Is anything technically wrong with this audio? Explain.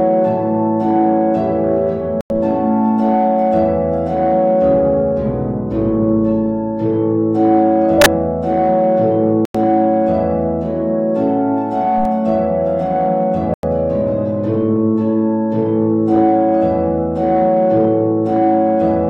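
Yes. The audio has two kinds of data corruption.

Corrupt frames muted at 2.21 to 2.39 s, 9.45 to 9.55 s and 13.48 to 13.63 s: the decoder rejected damaged compressed frames, and the player filled each gap with silence. Each dropout starts abruptly and lasts 0.18 s, 0.09 s and 0.15 s, which fits one to three frame lengths. Unlike the FLAC bursts, these are empty holes, not noise, and the timing afterwards stays in step.

Corrupt FLAC frames at 7.90 to 8.06 s and 11.98 to 12.05 s: flipped bits reached a decoder that skipped the checksum. Prediction then ran on wrong values from the damaged bit onward. The result is an error peaking at about −1 dBFS in the first event and about −14 dBFS in the second. These are corrupted signal where the others are silent. Clean audio resumes at the next intact frame.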